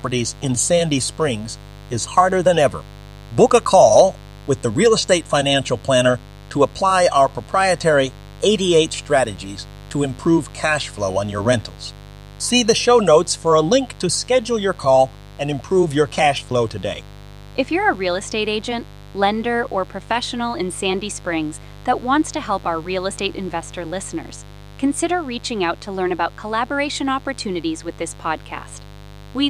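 A switching spike source, such as a dimmer or rectifier, couples into the speech path at 50 Hz mains, adding a steady raspy buzz throughout, roughly 20 dB below the signal.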